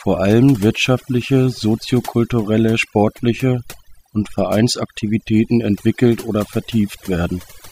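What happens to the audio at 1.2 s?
At 1.2 s you're hearing overdone noise removal, which runs the whole clip: an over-aggressive denoiser gating noisy bands, leaving twinkly near-silence, with quiet parts of the voice cut away along with the noise.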